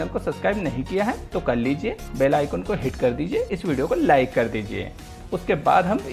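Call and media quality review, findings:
Nothing stood out on listening, and no findings are raised for this audio.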